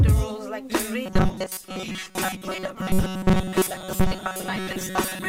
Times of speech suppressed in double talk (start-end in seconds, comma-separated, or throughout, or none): none